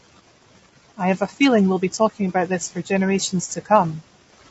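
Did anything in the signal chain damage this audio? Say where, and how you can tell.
Yes, at the codec stage, across the whole clip. The speech is rough and grainy, with noise between the harmonics and nothing above 7.7 kHz. The likely cause is low-delay AAC compression (AAC-ELD), whose short frames resolve pitch harmonics poorly. The damage fits a bitrate around 24 kbps.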